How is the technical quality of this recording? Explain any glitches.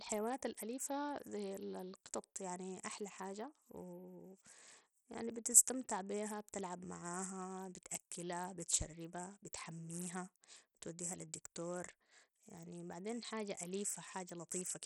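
The recording is heavily degraded for its whole length by what is likely Bluetooth SBC compression, with damage consistent with a low bitrate near 64 kbps. Too few bits for the upper sub-bands leave the treble thin and flickering, with gritty, aliased noise riding on the speech.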